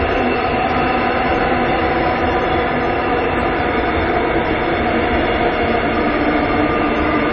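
From start to finish the audio carries plainly audible damage, most likely from MP3 compression at a low bitrate, somewhere around 30 kbps. With that few bits to spend, the encoder shuts off the treble entirely, so nothing sits above about 7.8 kHz and the top end sounds dull and boxed in. Below that line, quieter frequency components get dropped and restored from frame to frame, giving the sound a watery, swirling texture.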